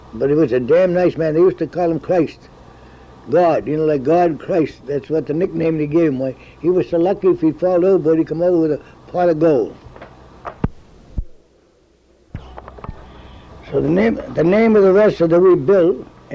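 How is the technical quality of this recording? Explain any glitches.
No audible glitches or faults.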